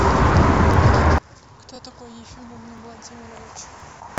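At 0.74 s there's the first overlapping-chunks glitch: the stream is being handled in one-second blocks, and each new block starts a touch early, so about 21 ms of speech plays twice. It repeats at 1.76, 2.78 and 3.80 s as a small regular stutter-click.

From 1.18 s to the end at roughly 4.18 s, the speech suddenly drops about 31 dB and turns faint. That's most likely one channel inverted, so the shared centre content cancels when the two sides sum to mono.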